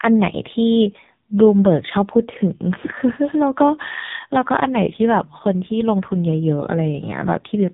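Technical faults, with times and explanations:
Throughout: AMR narrowband mobile codec. Nothing above about 3.8 kHz survives, so the speech sounds thin and boxed in, like an old phone call. The codec samples at 8 kHz and rebuilds the voice from a vocal-tract model driven by sparse pulses. Here the damage is heavy. The voice turns buzzy and synthetic, which fits a very low rate near 5.9 kbps, where too few bits remain to carry natural detail.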